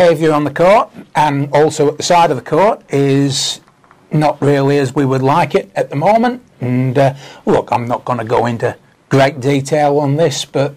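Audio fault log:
throughout: hard clipping. The signal was driven about 13 dB beyond what a stage in the chain could pass, so its peaks are cut flat, with around 4 percent of samples affected. The flattened tops add high harmonics, heard as fuzz on every loud sound.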